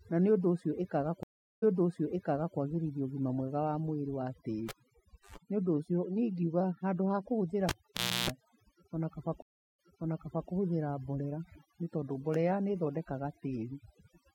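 Throughout the speech, overdone noise removal is audible: the reducer has been set so hard that individual frequency bands near its noise estimate are switched off, taking quieter parts of the voice with them. The background collapses to near silence scattered with twinkling specks.

From 1.23 to 2.57 s there is a stream reconnect. The connection drops, leaving about 0.39 s of silence, and a fresh decoder picks up mid-stream. Playback resumes roughly 0.95 s earlier than where it stopped, as a resent burst from the server would cause, so a stretch of speech repeats, with the first moment muted or fading in.

Between 4.69 and 5.36 s comes the first cable pulled and plugged in. A pop marks the disconnect, then about 0.63 s of near silence, broken by a 0.12 s burst of 50 Hz mains buzz as only the plug tip makes contact, and a second pop as sound returns. The same fault recurs from 7.69 to 8.30 s: 0.56 s disconnected, with a longer 0.31 s buzz, this time at 60 Hz.

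A second stream reconnect follows at 9.42 to 10.50 s, right after "ona kaba". The gap is about 0.36 s, and playback restarts 0.72 s earlier, so that stretch of speech is heard again.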